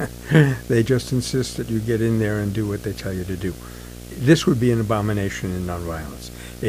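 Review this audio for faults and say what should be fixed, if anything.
Video or display buzz runs through the whole speech clip. A screen or its video cabling is coupling into the audio path, producing a buzz at the 59.94 Hz field rate with hash above it. A tone at the 15.7 kHz line rate also sits on top. Together they sit roughly 10 dB below the speech. To prevent it, route audio cables away from monitors and video leads, and break any shared ground path between the display and the audio chain.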